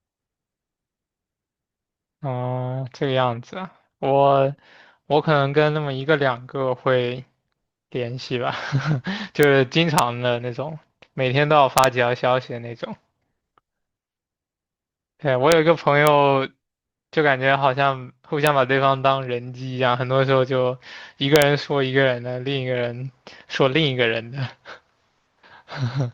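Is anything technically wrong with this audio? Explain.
Yes, there's integer overflow in this speech: sharp cracks at 9.43, 9.98, 11.78–11.84, 15.52, 16.07, 18.47 and 21.36–21.42 s. Loud peaks push barely past full scale, by about 1 dB at most, and wrap to the opposite sign instead of limiting, so each one snaps far harsher than clipping.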